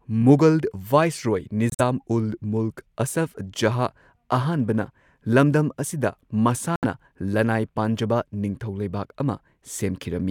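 At 1.70 s the speech drops into a dead hole for about 110 ms, then again at 6.76 s for roughly 90 ms. Both are corrupt frames muted: damaged compressed frames got rejected by the decoder, and the player filled the space with silence. The cuts start abruptly, their lengths point to short runs of several frames, and the timing after each gap stays intact.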